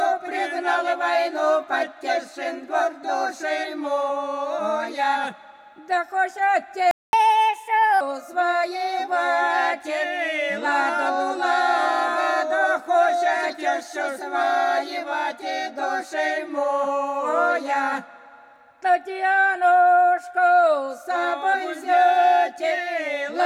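At 6.91 s the sound cuts out. Silence holds until 7.13 s, a gap of about 0.22 s. This is a playback stall. The audio stops in mid-flow, then resumes. The likely cause is a player that ran short of data or had its output thread blocked. Nothing reached the output until it recovered.

From 7.13 s to 8.01 s comes catch-up at higher speed. The player runs its backlog at 1.25 times normal speed to win back the lost time. It does this by resampling, so pitch rises with tempo. The shift is around four semitones, sharp and hurried. At 8.01 s speed and pitch drop back to normal.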